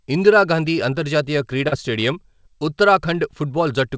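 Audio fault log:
1.68–1.75 s short concealed packet loss: after "ఇందిరాగాంధీ అంతర్జాతీయ" about 40 ms failed to arrive in time; the receiver continued the preceding sound, heard as a brief smear before blending back.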